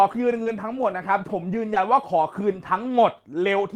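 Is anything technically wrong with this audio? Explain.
Yes, there are two kinds of packet fault in this speech.

Short concealed packet loss occurs at 0.43 to 0.48 s. About 20 ms never arrived in time, so the receiver extended the preceding sound to cover the gap, which gives a brief smear there.

Lost packet rebuilt from error correction shows up twice, at 0.46 to 0.48 s and at 2.78 to 2.80 s. In each case one 20 ms packet was replaced by the low-bitrate copy carried in the next packet, so there's no gap, just a rougher, noisier patch.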